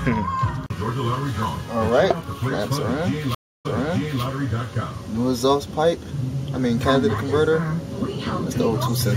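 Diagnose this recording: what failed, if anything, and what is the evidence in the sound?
A stream reconnect at the network stage: audio drops to silence at 3.35 s for about 0.3 s, then a fresh decoder resumes 0.58 s earlier, repeating material, with its first frame fading in, the disturbance ending by 4.23 s. The spectrogram shows a blank column, then a soft onset.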